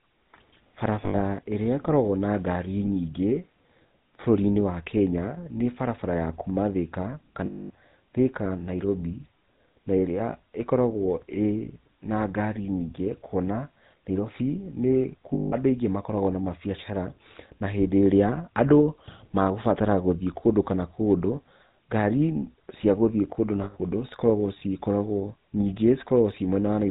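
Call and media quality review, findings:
GSM full-rate codec, whole clip. Speech passed through the original GSM coder, consistent with 13 kbps full rate. Vocal tract modelled and driven by a regular pulse train carrying only every third excitation sample; nothing passes above 4 kHz. Damage plainly audible: dull, band-limited speech with a steady buzzy, gravelly roughness, harsher on higher-pitched stretches.

Lost GSM frames, four events. Missing frames concealed by reusing the last good frame's parameters. Heard as a brief rough, metallic ring held over the gap.
1.02–1.19 s: 120 ms lost, scattered across 160 ms, longest run around 70 ms.
7.46–7.70 s: 240 ms, the longest.
15.34–15.53 s: 180 ms.
23.64–23.79 s, just after "cia gũthiĩ kũndũ na": 120 ms.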